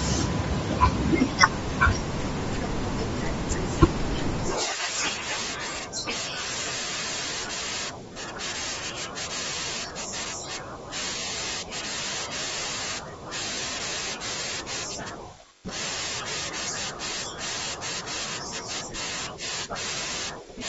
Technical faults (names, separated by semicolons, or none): Bluetooth LC3 compression